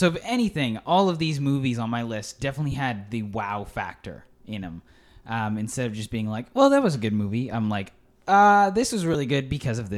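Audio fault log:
2.72–2.74 s and 9.13 s: lost LE Audio frames. About 15 ms each, after "on my list definitely" and after "I'm like uh this", which fits two lost frames. The LC3 decoder refills the gap by reusing the last spectrum with random signs, producing a brief noisy smear rather than a silent dropout or sharp click.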